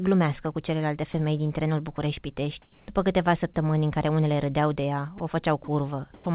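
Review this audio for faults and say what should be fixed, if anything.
At 1.96–1.98 s after "celelalte femei din trenul", 5.18–5.20 s after "unele râdeau de ea", 5.64–5.68 s and 6.14–6.26 s, bits of speech give way to flat hiss: sound dropped by the voice detector, likely clipping quiet word endings. Unlike comfort noise in place of the background, speech itself is lost.

From 2.62 to 2.88 s, before "câteva săptămâni în care", the real background becomes featureless noise about 3 dB quieter. This is comfort noise in place of the background, likely from discontinuous transmission. Here only the pause changes and no speech goes missing.

Disabling discontinuous transmission on this G.711 link, which cuts everything above 4 kHz, or lowering the voice detector's threshold and adding hangover time would prevent both.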